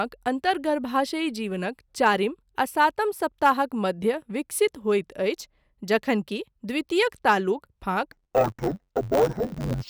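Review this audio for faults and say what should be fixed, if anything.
From 8.12 s to the end at 9.89 s, interleaved audio read as planar: the player takes each block of alternating left and right samples and treats its first half as left and its second half as right, so each channel plays stretched samples at half speed. With blocks only 10.88 ms long, the speech turns dull and robotic, buzzing at about 92 Hz, the block rate, without a clear octave drop. To prevent it, check that the sample layout flag matches the buffer's real interleaving before playback.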